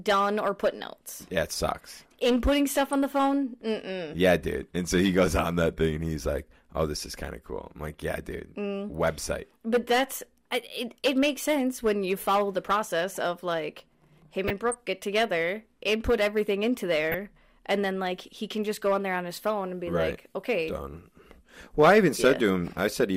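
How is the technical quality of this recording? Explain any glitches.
The speech is marred by three bursts of DAB burbling: at 2.87 to 2.93 s just before "on the phone", at 14.48 to 14.74 s between "process of like him" and "get together input everything", and at 17.10 to 17.37 s between "together input everything into" and "and then like he". Weak reception lets bit errors, roughly 0.15 percent, slip past error correction and corrupt sub-band samples and scale factors frame by frame, which fits a handful to a dozen or so MP2 frames per burst. The result is short blips of noise in single sub-bands. On a spectrogram these show as blocky horizontal bands flaring on and off, and in the waveform as short, irregular amplitude jumps.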